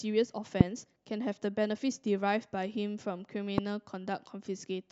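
Loud pops at 0.61–0.63 s and 3.58–3.60 s: single sharp thumps well above the speech, likely from a voltage spike such as static.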